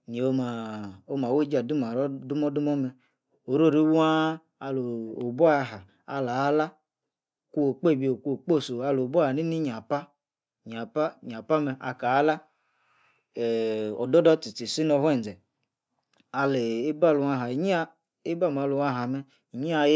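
No technical faults are audible.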